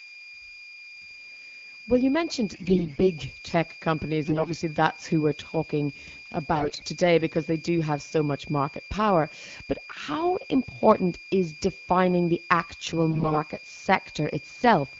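Switching supply whistle runs through the whole speech recording: a steady high tone near 2.4 kHz, roughly 20 dB below the voice, from a power supply whining in its audible range. AMR bit errors hit at 2.53–3.03 s after "well you mentioned", at 4.26–4.52 s, at 6.55–6.84 s just before "today because they do", and at 13.10–13.38 s after "is defining the actual". In each burst, flipped bits in the weakly protected parts of the wideband frames misplace excitation pulses and skew the fine parameters, so the voice keeps its pitch and loudness but turns hoarse and gargly, harshest around 6.6 s.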